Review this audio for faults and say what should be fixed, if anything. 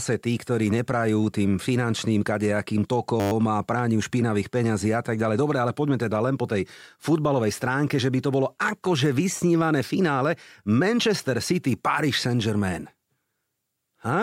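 A system hang loop buzzes from 3.2 to 3.32 s, after "finančným kadejakým" and before "a prániu". A 10 ms buffer repeated, giving a 100 Hz buzz. Prevent it by fixing the driver stall or enlarging buffers.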